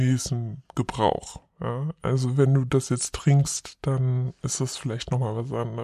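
From start to finish, the samples are being clocked out slower than they were captured, with no rate conversion. The ratio fits a 44.1 kHz recording played at 32 kHz. This is a wrong sample rate fault. Because timing and pitch are tied to the same clock, both drop together: the speech runs at about 0.73 times its proper speed and sits roughly 5.5 semitones low, sounding sluggish, drawn out and unnaturally deep.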